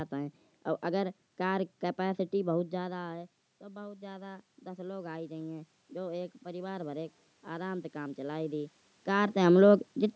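From 2.78 s to 8.73 s the automatic gain is rising: after the talker moves back around two and a half seconds, the input falls by about 14 dB and the gain climbs about 10 dB. Unlike a talker simply moving, the room noise swells along with the voice.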